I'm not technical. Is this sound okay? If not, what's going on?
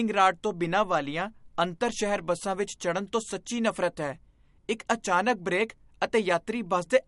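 No. MP3 compression damage runs through the whole speech clip. It sounds watery and swirly, s sounds turn metallic, and everything above 11.1 kHz is missing. The likely cause is heavy MP3 squeezing, which cuts the treble and throws away faint detail to save space.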